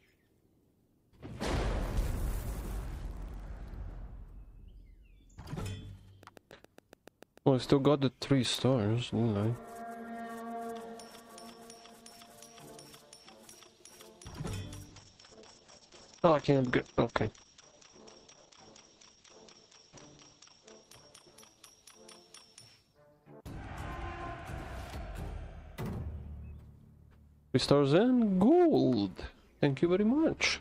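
Between 6.23 and 7.39 s a train of clicks ticks over the sound at a steady seven per second, about ten pulses peaking roughly level with the signal, most likely interference or a faulty connection. The similar, evenly spaced pulses set it apart from random crackle. From 14.86 to 24.17 s a call bitrate drop takes the stream from 64 to 9 kbps for about 5.5 s at its lowest, and bandwidth narrows from 20 kHz to 8 kHz. Unlike a simple filter, it sounds watery and rough as well as muffled.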